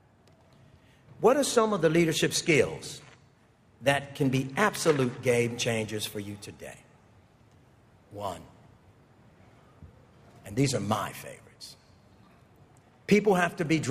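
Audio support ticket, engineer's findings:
No fault found in the audio for this ticket.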